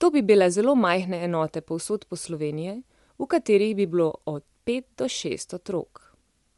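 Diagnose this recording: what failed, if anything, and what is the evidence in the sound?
The codec stage failed, and the likely culprit is Bluetooth LC3 compression. Throughout the speech, nothing sounds above about 11.6 kHz. Damage is plainly audible: a breathy, grainy edge where the upper band is noise-filled. This fits 10 ms frames near 48 kbps.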